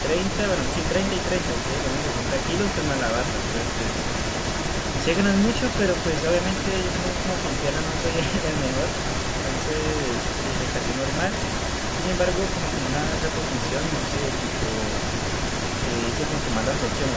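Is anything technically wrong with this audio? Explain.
Yes. An echo leak runs through the entire speech clip, from start to finish: a distinct second copy of the speech trails the original by about 285 ms, only slightly quieter. The likely cause is a loudspeaker at the far end whose echo canceller let its own playback back into the microphone. A single discrete repeat sets it apart from room reverberation, which decays smoothly rather than repeating.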